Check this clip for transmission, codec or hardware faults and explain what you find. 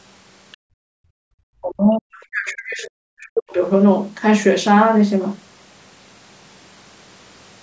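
There are echo-canceller problems here, three of them, all in the first four seconds of the speech.

From 0.52 to 0.57 s you get a brief, very faint scrap of the other side's voice leaking through, likely residual loudspeaker echo the canceller didn't fully remove.

Right after, from 0.57 to 1.32 s, the background is gated by the echo canceller: it clamps the mic down hard, so room sound drops out by up to about 39 dB for most of that stretch.

Then from 1.60 to 3.61 s, speech is suppressed in double talk, likely because both sides spoke at once; the talker dips by up to about 40 dB for roughly two seconds.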